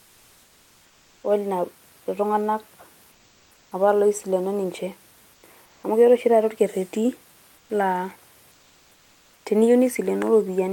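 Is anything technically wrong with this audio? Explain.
Yes. Comfort noise replaces the background at 0.0–1.23, 3.11–3.71, 5.33–5.43, 5.65–5.83, 7.57–7.69 and 8.51–9.45 s. The likely cause is discontinuous transmission, as in Opus DTX: during pauses, synthetic noise stands in for the real room noise. The room noise sits about 36 dB below the speech, and the substitute is flatter, featureless and about 2 to 5 dB quieter.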